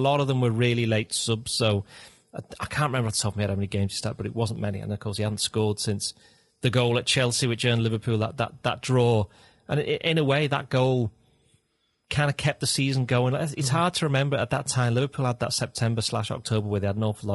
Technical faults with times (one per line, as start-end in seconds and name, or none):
0.00-17.35 low-delay AAC compression
4.56 dropped samples